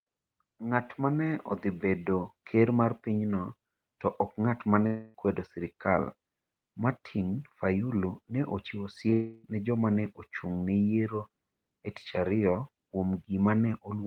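Right after "to ok ng'at ma", from 4.86 to 5.15 s, there's a long network dropout, likely: roughly 0.27 s of audio is lost and the last sound is stretched into a fading buzz or hiss, with no true silence, before "kwedo sirkal" picks up. At 9.10 to 9.13 s, after "ne ochiwo", a short concealed packet loss of about 20 ms leaves a quick smear. That runs straight into another likely dropout from 9.13 to 9.45 s, where about 0.31 s is filled with the same fading continuation until "ne joma ne ochung" arrives.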